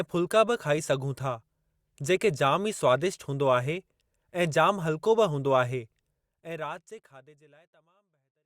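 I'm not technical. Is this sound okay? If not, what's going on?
Yes, nothing here sounds wrong. From around 6 seconds to the end, the sound fades out smoothly, the way an editor would finish a recording.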